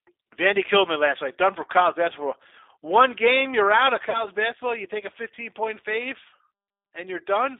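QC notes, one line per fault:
throughout: G.729 codec. The speech is confined to a narrow telephone band, roughly 250 Hz to 3.7 kHz, so it sounds thin with no low body and no air on top. The codec damage is plainly audible as a rough, slightly synthetic texture. Each short frame is rebuilt from a vocal-tract filter, a pitch predictor and a few coded pulses instead of the actual waveform. This points to an 8 kbit/s G.729A-type coder.
4.10 to 4.26 s: VoIP packet loss concealed by the speech codec. Just after "game you're out of", about 40 ms of audio goes missing, which fits two lost packets. The decoder covers the gap by extending its last pitch and filter state with falling gain, so the sound smears into a buzzy tone or coloured noise that fades. Because each frame predicts from the one before, the speech stays weak or distorted until about 4.26 s, after the stream resumes.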